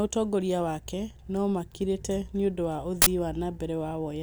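A speech recording with an uninitialised buffer fault from 3.02 to 3.07 s, a 46 ms burst of loud digital noise. Its length fits a 2048-sample block played out before audio was written to it. Unlike a dropout, it replaces the sound with noise rather than silence.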